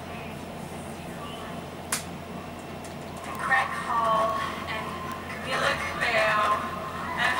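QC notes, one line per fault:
3.35 s, 4.30 s and 5.12 s: bit error spike. Each is a single sharp tick lasting one sample. The peaks reach about -13 dBFS at 3.35 s and 5.12 s, and about -20 dBFS at 4.30 s. A flipped bit makes the sample value leap by a power of two and then snap straight back. That one-sample jump holds energy across the whole spectrum, so it sounds as a bright click that doesn't follow the surrounding audio.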